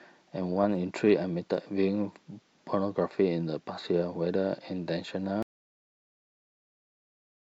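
At 5.43 s the speech cuts off into an audio dropout to silence that lasts to the end, plain silence with no room tone, likely from lost input.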